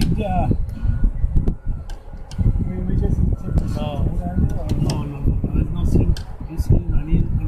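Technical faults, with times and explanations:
No technical faults detected; nothing to flag at any point in the audio.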